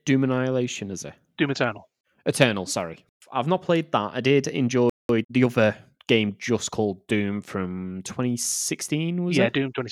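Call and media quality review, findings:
Playback stall, 4.90–5.09 s: likely buffer underrun or blocked audio thread starving the output. Speech cuts out mid-flow for about 0.2 s of silence, then resumes rather than restarting.

Time-compressed catch-up, 5.09–5.47 s: player draining backlog by dropping short segments and cross-fading the joins, running at 1.5x. Speech sounds hurried for about 0.4 s, pitch unchanged.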